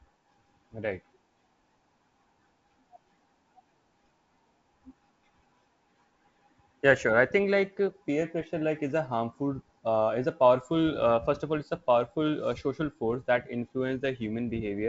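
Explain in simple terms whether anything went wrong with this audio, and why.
Nothing went wrong with this speech audio; it simply sounds like an ordinary wideband phone call.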